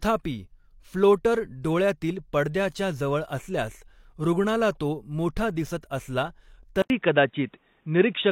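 At 6.82 s an 80 ms gap appears in the waveform. The speech then returns dull and boxy, shifted about 5 dB in level, over new noise about 50 dB down, because the input likely switched to a poorer device. The spectrogram goes empty above 3.8 kHz.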